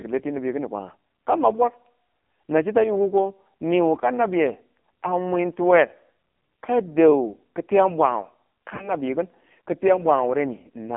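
Throughout, the speech carries heavy AMR narrowband mobile codec damage. Only about 200 Hz to 3.4 kHz passes. The thin, buzzy, synthetic tone fits a low AMR-NB mode near 5.9 kbps.

From 8.76 to 8.91 s, lost AMR speech frames cause a dropout. The decoder stretches the previous sound, which briefly warbles and fades. The damage fits two lost frames, about 40 ms.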